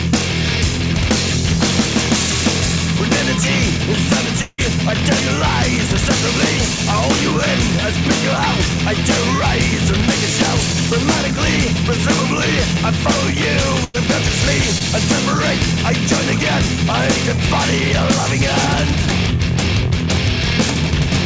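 From 4.42 to 4.60 s the sound smears into a fading buzz or hiss that sinks into a brief hush of about 30 ms before resuming further on. This is likely a long network dropout: about 160 ms never arrived, and the receiver extended the last sound to cover the hole.

At 13.84 to 13.96 s there is a shorter held, dimming sound, then the audio picks up further along. This burst of packet loss removed about 100 ms, which the receiver bridged by continuing and attenuating the preceding sound until real audio returned.

At 14.78 to 14.82 s a quick smear or wobble briefly disturbs the sound. This is short concealed packet loss: about 20 ms failed to reach the decoder in time, so the gap was filled from the last sound and blended back, within a call path whose band stops at 8 kHz, consistent with G.722 at 64 kbps.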